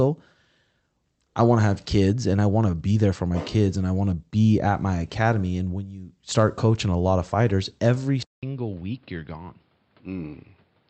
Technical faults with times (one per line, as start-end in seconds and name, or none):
2.36-2.38 short concealed packet loss
8.23-10.90 input switched to a poorer device